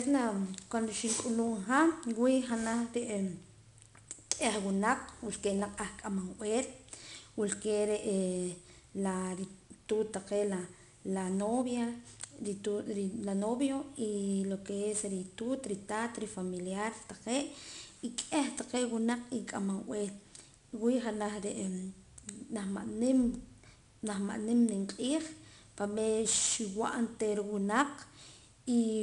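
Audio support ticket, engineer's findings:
Gritty hiss riding on the speech for the full clip, rising and falling with level; grit and edge on sharp onsets. Probable component: 4-bit ADPCM compression stage. Mechanism: each sample coded as a coarse 4-bit step from a prediction, so quantisation noise tracks the signal and the adaptive step lags on fast attacks. Nothing above 10.6 kHz, consistent with a sample rate near 22 kHz and a stream around 88 kbps.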